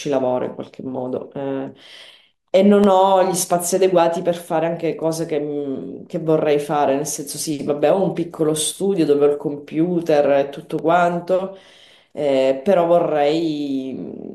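Speech clip with three blocks of digital silence, at 2.84, 8.72 and 10.79 s, each just 1 to 4 ms and heard as ticks where the signal snaps to zero and back, which fits a 64-sample buffer not being filled in time.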